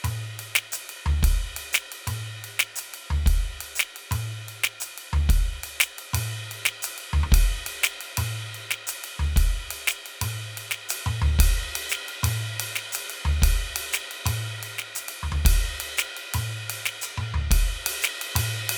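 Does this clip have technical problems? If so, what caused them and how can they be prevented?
Yes. At 15.65 s the music has a case of dropped samples: the likely cause is that a handful of samples, a tiny fraction of a millisecond's worth, went missing from the stream, so the waveform jumps straight from one value to a later one. The gap is far too short to remove any musical content, but the sudden step is heard as a single sharp click and shows as a thin vertical line across the spectrum. Preventing it means giving the playback or recording chain enough buffer headroom and stable clocking so the stream never skips samples.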